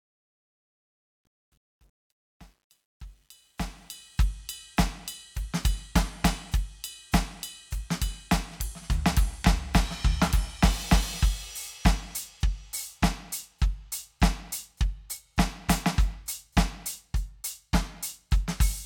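From the start to about 4.18 s, the music fades in with truncation distortion on the fade. The gain stage keeps only about 10 bits and adds no dither, so the quietest part, up to about 3.32 s, is reduced to coarse level steps and sounds gritty. A zoomed waveform shows stair-stepped, squarish shapes, and a spectrogram shows broadband grainy noise that appears and vanishes with the signal until the fade reaches full level.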